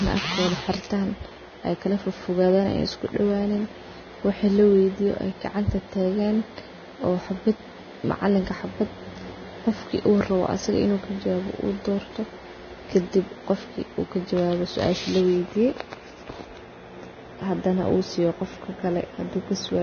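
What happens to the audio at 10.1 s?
At 10.1 s the speech sounds hissy and grainy, with a dull top end and smeared consonant onsets, and this runs through the whole clip rather than starting there. Nothing is present above about 6.5 kHz. This is likely Vorbis compression at a very low setting, around 18 to 19 kbps: the encoder lowers its cut-off and quantises what remains of the treble so coarsely that fine detail turns into noise of similar energy.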